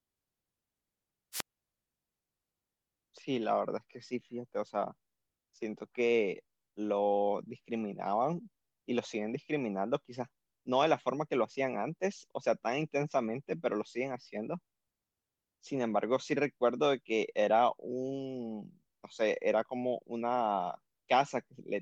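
From 1.32 to 1.45 s, the wireless microphone's radio signal weakens until the receiver's squelch closes, a wireless microphone squelch dropout. A short rise of hiss leads into a near-silent hole of about 45 ms, and then the voice comes back.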